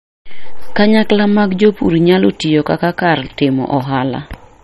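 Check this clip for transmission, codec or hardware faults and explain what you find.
Two faults are audible in the speech. Throughout, nothing is present above 12.4 kHz and the sound carries smeared, watery artefacts, likely low-bitrate audio saved at a high bitrate. A single low-rate encode would show the same loss, but the higher rate adds no detail back.

Hard clipping appears at 0.79–1.13 s, 1.63–1.68 s and 2.09–2.73 s, overdriven by about 2, 3 and 2 dB. Peaks are cut flat, adding crackle only on loud moments, unlike codec artefacts, which stay constant.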